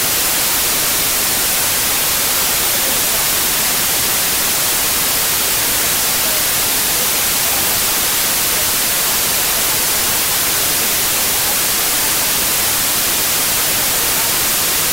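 Wrong sample width runs throughout: data written as packed 3-byte samples appear to be read as 4-byte ones, so most values mix bytes from neighbouring samples. The result is loud noise with the original sound buried beneath it, playing about 1.33 times too fast and correspondingly high in pitch.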